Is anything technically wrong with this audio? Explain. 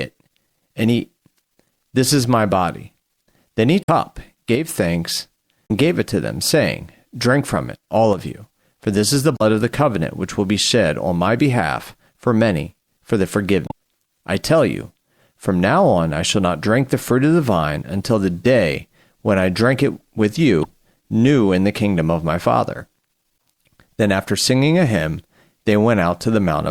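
Yes, two kinds of fault show up. Damaged data in a compressed stream hits at 3.81–3.89, 5.65–5.71, 9.34–9.42 (between "for this is the" and "of the covenant which"), 13.65–13.72 (between "for many for the" and "I tell you from") and 20.61–20.65 s (between "I drink it with" and "new in the kingdom"). Corrupted bytes make the decoder misread frames and lose sync, so each one comes out as a short chirp, squawk, click or hole.

There's also a sudden level dip of about 6 dB at 4.55–4.69 and 8.13–8.18 s. That's most likely one channel dropping out, so the mono sum briefly carries only half the shared signal.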